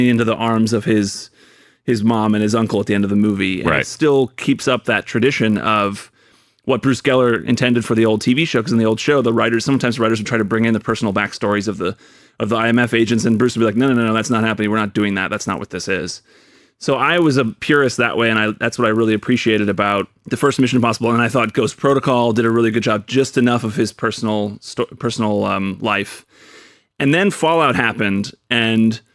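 Throughout the speech, a resampler restarted on every block converts 48 kHz to 24 kHz in separate 20 ms chunks, leaving an error at each edge. The result is a 50 Hz buzz present only with signal, seen as evenly spaced vertical lines on a spectrogram and tiny waveform steps.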